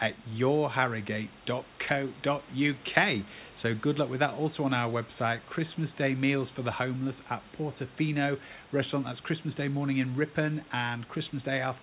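Speech, with no technical fault to be heard. It has the narrow sound of a call path, with nothing above 4 kHz and the lowest bass trimmed by the microphone processing, which fits a G.711 A-law codec at 64 kbps.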